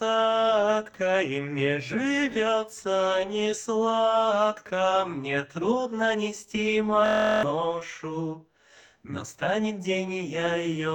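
A system hang loop hits this audio from 7.06 to 7.43 s. The computer or its audio driver stalled and stopped supplying new samples, while the sound hardware kept replaying the one block left in its ring buffer. That block lasts 23.22 ms, which fits a 1024-sample buffer, and it repeats 16 times at 43.1 Hz. Because the loop is so short, it sounds like a steady, pitched buzz rather than a stutter, and roughly 0.4 s of audio is lost under it.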